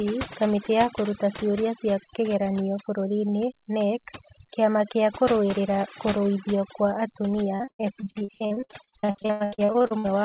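From the start, overdone noise removal leaves the background nearly silent except for twinkling specks, while the speech has its quieter parts suppressed along with the noise. On a spectrogram, the gaps between syllables show scattered isolated dots, and band energy cuts out around the edges of words.

From 7.56 s to 10.06 s, repeated packet loss turns the speech choppy and robotic, with dozens of holes up to about 98 ms long patched by repeating the preceding sound, so nearly half the stretch is concealed. The waveform shows repeated copied segments, and the spectrogram shows smeared, stepped blocks, all below 4 kHz as the telephone-band call path would give.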